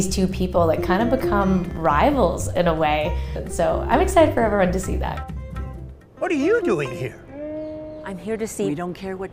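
Nothing is technically wrong with this clip, so there are no times or causes to report.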